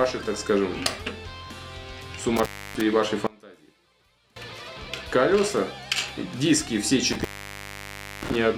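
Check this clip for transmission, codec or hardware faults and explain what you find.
Three faults stand out: two dropouts from an intermittent contact and one stretch where the level collapses in a way that points to a polarity problem.

The intermittent contact faults occur at 2.37–2.81 s and again at 7.12–8.36 s. A loose plug or cable briefly loses connection, so the signal path opens and the sound cuts out. Crackle marks the edges of each break as the contact scrapes open and closed, and only faint hiss remains in the gap. The first opening lasts about 0.29 s; the second is much longer, nearly a full second at about 0.98 s.

From 3.27 to 4.36 s the level drops by about 26 dB, leaving only a faint residue of the sound. The likely cause is one channel inverted. With one stereo channel's polarity reversed, anything common to both channels cancels when they are summed to mono. Centred material nearly disappears, and what survives is just the difference between the two channels.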